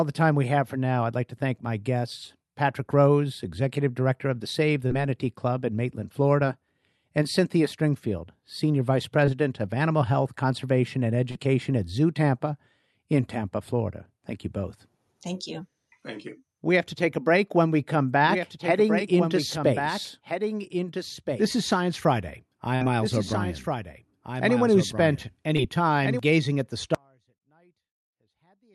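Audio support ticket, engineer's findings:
Short concealed packet loss at 4.87, 9.26, 11.31 to 11.37 and 25.57 to 25.61 s. Brief smears where the decoder extended the last sound over missing audio of about 20 ms each, 40 ms at 11.3 s, which fits 20 ms codec frames. Receiver-side concealment, then blend back.

Doubled audio track from 17.92 to 26.19 s. A full-band second copy roughly 1.5 s behind and about 5 dB quieter, with no reverb tail, starting and stopping abruptly. Likely a second, slower capture path mixed into the same output.

Burst of packet loss at 22.75 to 22.83 s. About 60 ms of audio missing, bridged by a held, decaying continuation of the preceding sound before playback resumes further on. Jitter buffer or network loss, beyond what short concealment hides.

Audio dropout to a faint residue from 26.95 s to the end. Abrupt cut, not a fade, leaving only a faint trace of signal about 40 dB down. 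The path after the break stays live, likely an upstream source or capture loss with leakage.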